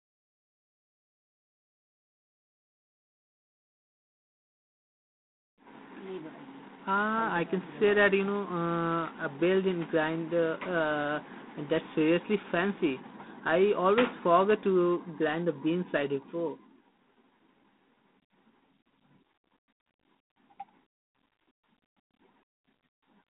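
From start to finish the speech carries G.726 ADPCM damage: a harsh, rasping hiss that swells and fades with the voice's level. This fits 24 kbit/s coding, where too few bits track each sample's prediction error. Plain band-limiting would not add that level-following grit, and nothing passes above 3.9 kHz.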